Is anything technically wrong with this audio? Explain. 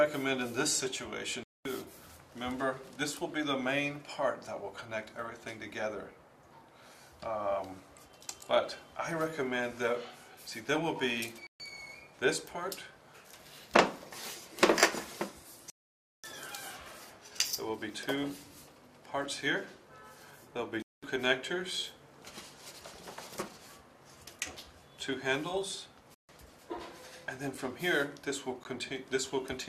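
Yes, there are two kinds of problem. First, five Bluetooth dropouts: 1.43–1.65 s, 11.47–11.60 s, 15.70–16.24 s (the big one, about half a second), 20.82–21.03 s and 26.14–26.29 s. The sound just vanishes and picks up further along, as if it had kept playing underneath. That's likely audio packets not reaching the headphones in time.

Then two blocks of digital silence, at 27.55 s and 28.64 s, roughly 5 ms and 16 ms long. A chunk of samples got swapped for zeros, cut in and out with no fade, so the first comes across as a tick and the second as a very short hole. The first fits a 256-sample buffer that wasn't filled in time.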